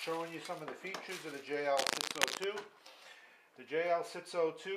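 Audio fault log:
1.77–2.44 s, cable scratch noise: for 0.67 s a dense, uneven burst of scratching and rustling sits over the sound, roughly as loud as the signal itself. The likely cause is a worn cable or connector being moved, making its contact resistance fluctuate rapidly.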